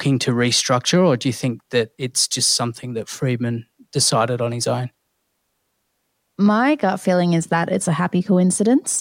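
No technical fault can be heard anywhere in the speech. There is nothing to place in time or trace to a cause.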